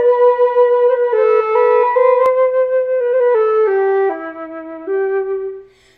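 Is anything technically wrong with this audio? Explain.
Yes, there's a doubled audio track from the start until 2.26 s: a clean copy trails the original by about a third of a second, around 5 dB quieter, then cuts off abruptly. It's likely a second capture path or misaligned edit.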